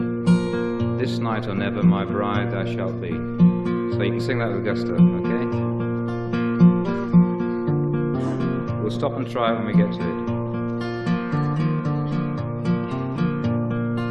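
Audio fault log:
8.14 s, damaged data in a compressed stream: a brief glitch, as the decoder misreads corrupted frame bytes and resyncs at the next header.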